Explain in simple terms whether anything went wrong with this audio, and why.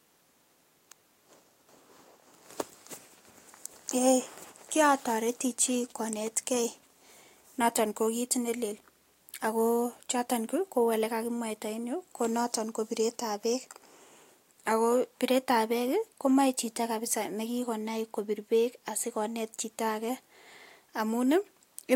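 Nothing went wrong; no faults can be heard anywhere.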